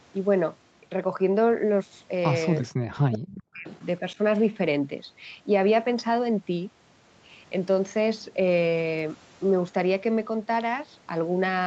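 Speech suppressed in double talk hits this speech clip from 2.64 to 3.68 s, where the voice sinks by about 40 dB for roughly a second, and again briefly between 4.01 and 4.19 s with a shallower dip of about 10 dB. The likely cause is an echo canceller that, faced with both ends talking at once, could not tell this talker from its own loudspeaker echo and pulled the level down. An echo leak follows from 3.68 to 3.85 s: a faint copy of the voice, about 30 dB below the speech, returns 405 ms late. This is likely the far end playing the call through a loudspeaker while its canceller failed to strip out everything its microphone picked up, so the remainder was sent back. Nothing in the audio extends above 8 kHz, which fits a wideband call codec such as Opus.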